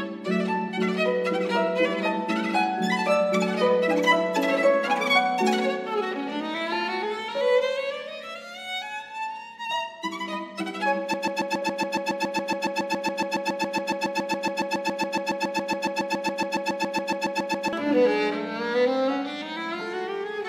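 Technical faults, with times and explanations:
11.14–17.73 s, broken-record loop: a 139 ms fragment repeats back to back, exactly the same each time, about 47 times over roughly 6.6 seconds, producing a rapid stuttering buzz with no forward progress. This is likely a stall in the player, encoder or stream, which kept sending the last fragment it held instead of new audio. Whatever should have played during those seconds is missing, and normal sound resumes abruptly at 17.73 s.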